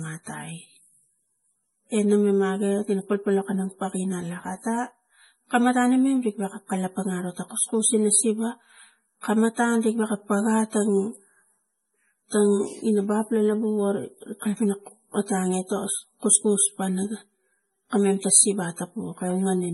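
Throughout the speech, a low-bitrate MP3 was most likely re-encoded at a much higher bitrate, so the file looks generous but still carries the damage of the first pass. Nothing sits above 11.5 kHz, so the top end sounds dull and closed in, and the thin, swirly texture fits an original encode around 32 kbit/s. This is low-bitrate audio saved at a high bitrate: the larger second encode cannot put back what was discarded.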